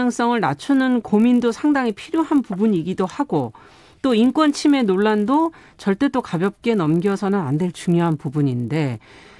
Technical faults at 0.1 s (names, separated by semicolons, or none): resampler restarted on every block